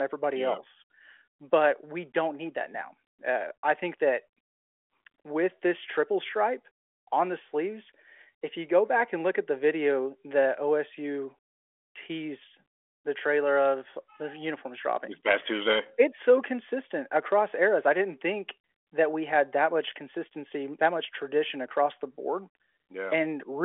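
No technical faults can be heard in the speech, which comes over a 40 kbit/s G.726 telephone path limited to the 300 Hz to 3.4 kHz line band.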